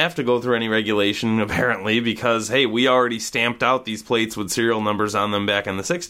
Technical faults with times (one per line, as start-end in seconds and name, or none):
none